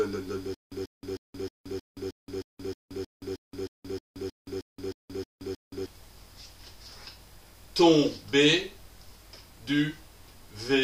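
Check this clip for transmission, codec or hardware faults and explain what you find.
One playback fault is present. From 0.54 to 5.86 s there is a stutter with silent gaps: a 139 ms burst repeats 17 times, separated by 174 ms of dead silence, most likely a stalled stream replaying its last fragment.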